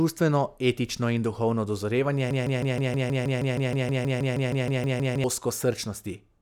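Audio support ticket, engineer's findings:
Broken-record loop, 2.31 to 5.24 s, after "etično in duhovno dozorevanje". A 158 ms fragment of speech repeats back to back 19 times. Likely a stalled player or stream resending its last buffered fragment. The intended audio in that span is lost.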